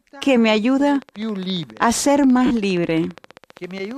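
From 0.89 s to the end, a train of clicks runs at a steady 14.9 per second, around fifty pulses of near-identical shape, peaking at roughly the signal's own level. The likely cause is interference from nearby equipment or a faulty connection or power supply.

Between 2.46 and 2.51 s, 50 ms of lost LE Audio frames occur, which fits five 10 ms LC3 frames. The decoder fills the gap by reusing the last spectrum with randomised signs, so the sound briefly smears into noise before normal decoding resumes.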